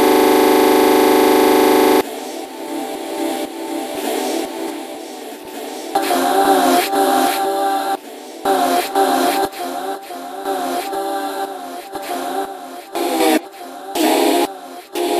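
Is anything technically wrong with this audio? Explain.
Yes. A system hang loop is already under way when the audio begins and lasts until 2.01 s. The playback system froze while the sound hardware kept cycling through the same ring buffer, so one 40 ms slice of audio repeats exactly, about fifty times in a row. Repeating at 25 Hz, the loop is heard as a rough, mechanical buzz at that rate rather than as the sound itself.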